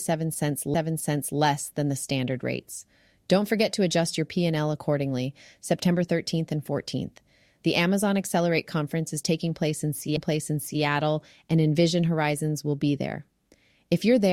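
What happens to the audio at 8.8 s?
Nothing goes wrong at 8.8 s: the speech runs on cleanly through that moment with no dropout, click, glitch or other fault.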